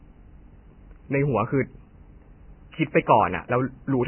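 Vorbis compression runs throughout this speech clip, from start to finish, and is likely the cause of its heavy damage: nothing survives above about 3.1 kHz, and the band beneath is rough and grainy, with a hissy texture and smeared consonant onsets. The codec appears to have been starved of bits, which fits a very low bitrate of around 10 kbps. It sets a low cut-off and quantises the remaining upper spectrum so coarsely that fine detail turns into noise of similar energy.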